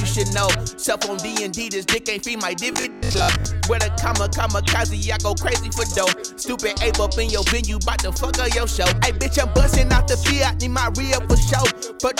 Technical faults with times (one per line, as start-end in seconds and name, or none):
2.73-3.45 robotic sound from repeated short buffers